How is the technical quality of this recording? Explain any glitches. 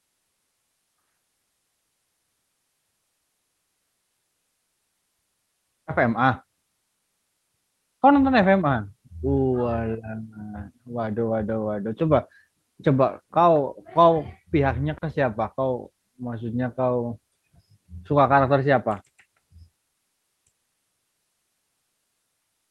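No glitches: the speech carries the typical sound of a call path, with its top end stopping around 12 kHz as fits a super-wideband call codec, and nothing in it departs from ordinary call audio.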